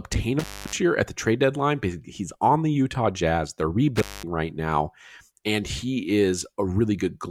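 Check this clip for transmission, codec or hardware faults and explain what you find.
Two dropouts from an intermittent contact, at 0.39 to 0.77 s and 3.96 to 4.23 s. A loose cable or plug opens briefly, about 290 ms then 210 ms, so the speech cuts out with crackle at each edge and faint hiss between.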